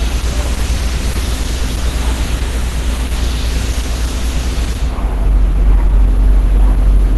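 A short recording of sounds, and it's plainly damaged by Opus compression all the way through. Nothing reaches above 12 kHz, and what's left has that hoarse, muffled, grainy texture you get when the encoder drops into its hybrid speech-plus-music mode at a starved rate. It's likely a low-bitrate Opus encode, and the damage fits something around 16 kbps, where there simply aren't enough bits to keep tonal detail clean.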